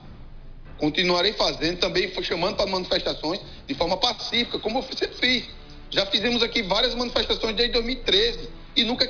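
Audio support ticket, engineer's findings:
No faults found on listening; the signal shows no audible dropouts, glitches, distortion or timing errors across the clip.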